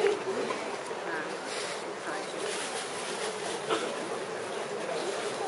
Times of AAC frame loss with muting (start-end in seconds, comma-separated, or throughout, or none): none